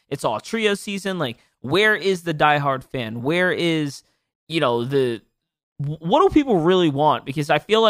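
A speech recording with two brief glitches, at 2.31 s and 4.52 s. Each is a tiny jump in the sound rather than a gap. Roughly 5 ms of audio seems to vanish each time. The two sides are butted straight together. The likely cause is a dropped buffer (overrun). The recording program fell behind and the hardware overwrote samples before they were collected.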